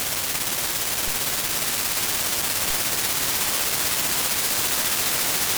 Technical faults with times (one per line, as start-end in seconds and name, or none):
1.08 DC step